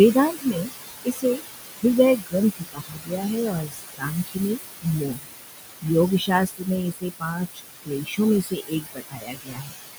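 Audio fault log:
Throughout: noise suppressor artifacts. The suppressor pulls steady noise down by about 18 dB, so the background sinks in gaps and swells under speech.
0.14 to 0.7 s, 1.05 to 1.44 s, 2.18 to 4.38 s, 4.82 to 5.34 s, 6.19 to 9.73 s: speech cut by the noise suppressor. Quiet bits got mistaken for noise and ducked by about 16 to 22 dB, so endings and soft consonants sound swallowed. That adds up to roughly a fifth of a second in each of the first two spans, about a third of a second in the fourth, and around a second and a half in each of the two long ones.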